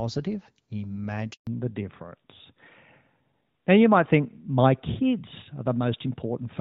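Speech coded as HD Voice, with two call faults. A handover gap silences the sound from 1.33 to 1.47 s. No frames arrived for 140 ms while the call switched networks. Right after, at 1.47 s, comes a fallback to narrowband that lasts to the end. Everything above 4 kHz is gone, and the speech turns duller and rougher. This fits a drop from AMR-WB to a narrowband AMR codec. Before the switch, the wideband coding adds only light, hard-to-hear damage.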